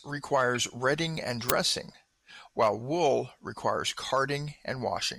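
Speech with two brief blips, at 0.55 to 0.57 s (around -25 dBFS) and 4.10 to 4.12 s (around -30 dBFS). These are corrupt frames decoded: damaged bits in a frame or two misplaced energy across the spectrum. At 1.50 s a sharp, loud crack of digital noise comes from an uninitialised buffer: leftover memory was played as samples for about 2.7 ms, which fits a 128-sample buffer.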